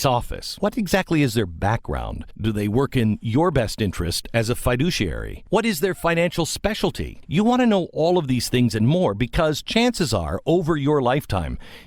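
No technical faults are audible anywhere in the recording.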